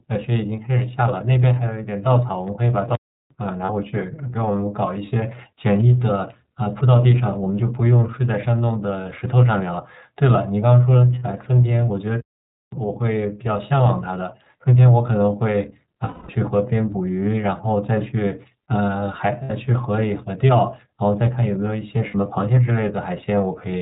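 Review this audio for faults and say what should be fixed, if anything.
The whole clip carries the iLBC codec sound: nothing above 4 kHz, and a plainly audible rough, slightly synthetic texture on the speech. The narrow band and the grain fit iLBC's 30 ms frame mode at 13.33 kbps, where each frame's excitation is coded independently. To prevent this, use a wideband codec such as Opus at a higher bitrate wherever the link allows it.

A playback stall cuts the speech to silence from 2.95 to 3.31 s, about 350 ms, and again from 12.20 to 12.72 s, about 520 ms, before the sound resumes. The likely cause is the player running out of buffered data or its output thread being blocked. To prevent this, enlarge the output buffer and keep the audio thread free of blocking work.

Lost iLBC frames appear at 3.66 s and 11.19 s (30 ms each), 16.04 s (240 ms), and 19.44 s and 22.08 s (60 ms each). Each gap sounds like a held, faintly buzzy vowel as the decoder repeats the last pitch cycle with added noise. 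The 240 ms gap fades audibly, and the voice recovers almost immediately after each gap. To prevent this, add forward error correction or redundancy, and use a jitter buffer sized for the network's loss pattern.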